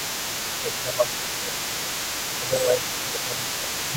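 The other side's voice leaking through runs from 0.0 s to the end of the clip, a second voice sitting roughly 15 dB below the main talker. The likely cause is that the talker's device plays the far end on a loudspeaker, the microphone picks it up again, and the echo canceller leaves a residue. That residue comes through as a faint second voice under the main one.

Speech suppressed in double talk appears from 0.6 s to 1.94 s and again from 2.29 s to the end. The main voice dips by up to about 15 dB, for roughly a second in the first stretch and about a second and a half in the second, so it sounds pushed back and uneven. This likely happens because both sides talk at once and the echo canceller, unable to tell its own talker from the echo, turns everything down.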